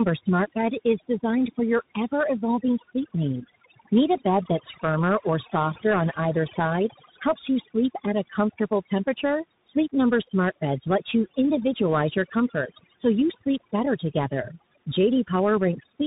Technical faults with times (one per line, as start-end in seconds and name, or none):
0.00-16.06 overdone noise removal
0.00-16.06 tandem speech coding